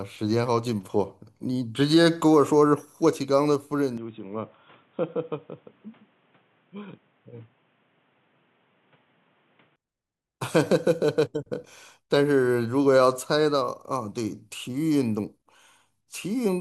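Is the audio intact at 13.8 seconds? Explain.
Yes, the speech at 13.8 seconds plays through cleanly, with no dropout, click, glitch or other fault at that moment.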